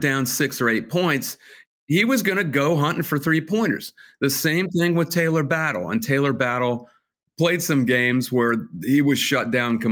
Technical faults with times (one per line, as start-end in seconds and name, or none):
none